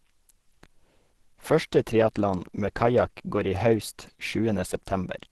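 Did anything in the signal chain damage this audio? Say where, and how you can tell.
Yes, at the codec stage: the speech is muffled and hoarse throughout, with nothing above about 12.1 kHz, which points to Opus compression at a low rate, likely around 16 kbps in its hybrid mode, where the speech coder handles the low band and the rest is thinly filled.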